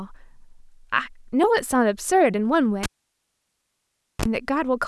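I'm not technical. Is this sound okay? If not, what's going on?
No. At 2.83 s the speech cuts out with a pop and goes nearly silent for about 1.4 seconds. Just before it returns at 4.25 s there's a short 50 Hz mains buzz, then a second pop. That's a cable pulled and plugged in while the sound was live.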